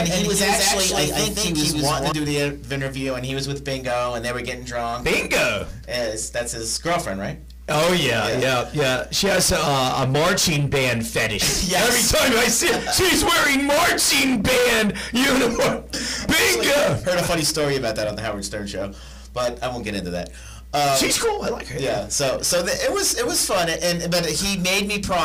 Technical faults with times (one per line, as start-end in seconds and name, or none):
0.00-2.12 doubled audio track